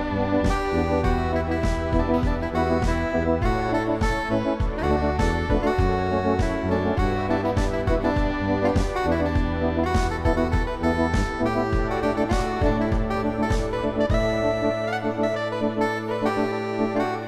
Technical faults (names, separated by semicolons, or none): none